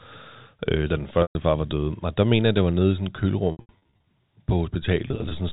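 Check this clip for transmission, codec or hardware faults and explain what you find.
Packet loss with pitch repetition occurs three times: 1.22 to 1.35 s, between "øh da den" and "far var" (130 ms lost, consistent with 10 ms packets); 3.52 to 4.02 s, after "nede i sådan et" (340 ms lost across 540 ms, longest run 80 ms); and 5.08 to 5.31 s (120 ms lost across 250 ms, longest run 20 ms). The receiver bridges each gap by repeating the last pitch period, fading it over about 50 ms, which produces brief buzzy, held tones that dip toward silence during the longer runs. The G.711 telephone band carrying the audio is audible throughout.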